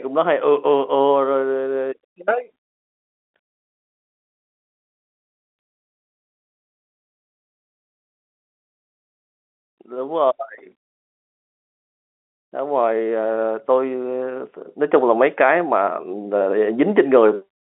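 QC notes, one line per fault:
Nothing to flag here, just speech coming over an ordinary G.711 telephone line, so it sits in the usual narrow band of roughly 250 Hz to 3.5 kHz with nothing above 3.8 kHz, which is what that line gives you.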